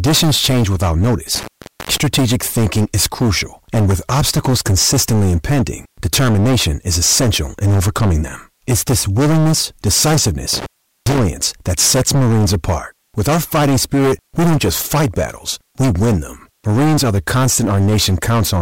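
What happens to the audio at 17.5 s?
At 17.5 s you're hearing the same hard clipping that runs through the whole speech clip. The signal is driven about 16 dB past what the chain can carry, so every peak gets sliced flat, and roughly a fifth of the samples are sitting at the ceiling. Those squared-off tops throw harmonics way up the spectrum, so at this moment, like everywhere else, loud sounds come out with a harsh, gritty fuzz rather than occasional crackle.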